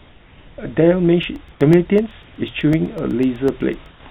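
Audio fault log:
0.00–0.58 s, comfort noise in place of the background: the opening background is a steady, featureless hiss at the room's own level, about 30 dB below the loudest sound. Likely the sender's voice detector paused transmission and the receiver substituted shaped synthetic noise.
1.23–3.99 s, periodic USB or driver dropouts: evenly spaced ticks every 0.125 s, about twenty in all, each a roughly one-millisecond gap of silence. A background task stalling the USB bus or audio driver at a fixed interval drops audio each time.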